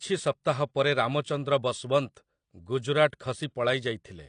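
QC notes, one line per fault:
Throughout, AAC compression: the speech sounds dull and smeared, with nothing above 9.8 kHz and plainly audible codec damage. It's likely AAC-LC squeezed to a low bitrate, which fits about 32 kbps. The coder lops off the top band and quantises the rest coarsely.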